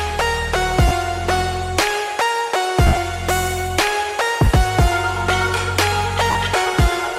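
Lost LE Audio frames at 0.88 s (30 ms), 2.87 s (80 ms scattered over 100 ms, longest run roughly 70 ms), 4.45 s (20 ms) and 6.31 s (40 ms). The decoder reuses the last spectrum with random signs, so each gap sounds like a brief noisy smear. On a spectrogram, harmonics blur into noise; the waveform keeps its envelope but loses its shape.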